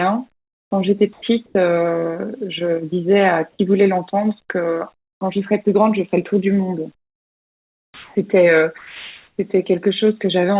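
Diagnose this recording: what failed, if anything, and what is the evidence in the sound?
Comfort noise in place of the background at 0.32–0.71 s, 1.13–1.22 s, 4.94–5.21 s and 6.95–8.15 s, in the call-processing stage, where the speech band stops at 4 kHz. The pauses turn to flat, featureless hiss, about 22 and 26 dB quieter in the first and third gaps. This is likely discontinuous transmission with receiver-generated noise.

Sound dropped by the voice detector at 1.46–1.55 s, 3.53–3.59 s and 8.78–9.38 s. The sound gives way to steady noise or near silence, losing about 40 ms, 30 ms and 340 ms of sound. The detector likely judged these sounds to be background and stopped sending.

Onset clipped by the voice detector at 5.19 s. About 20 ms of the start is replaced by synthetic noise, so the speech begins abruptly, without its soft attack. The sender's detector was likely slow to register that speech had resumed.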